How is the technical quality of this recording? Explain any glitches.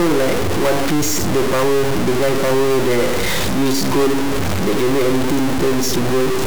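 The recording has one serious fault that runs through the whole clip. From start to end, the speech has a harsh, buzzy distortion, and the pauses are filled with noise instead of silence. The likely cause is a stuck bit. One data bit seems held at a fixed value, so about half the samples are pushed off by a step of about -15 dBFS. The pattern follows the waveform. Near zero, the bit flips with the sign of quiet samples, so the gaps turn noisy.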